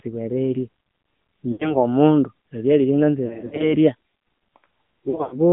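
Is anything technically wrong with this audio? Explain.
Yes. Throughout, the speech goes through an AMR narrowband mobile codec: it is confined to 150 Hz to 3.4 kHz and sounds buzzy and synthetic, which fits a bitrate near 10 kbps. Plain band-limiting would not add that artificial texture.

Lost AMR speech frames occur at 1.52 to 1.77 s, 3.26 to 3.74 s and 5.10 to 5.39 s. The decoder repeats its last pitch and vocal-tract settings with falling gain, so the sound smears and fades instead of clicking or cutting off.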